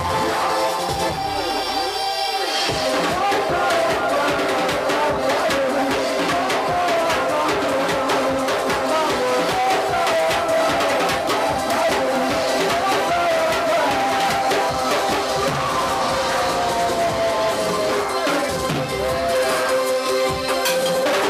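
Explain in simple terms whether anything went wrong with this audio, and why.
At 12.16 s there is a repeated buffer: new audio arrived late, so a tiny 1.45 ms piece played twice, heard as a brief click.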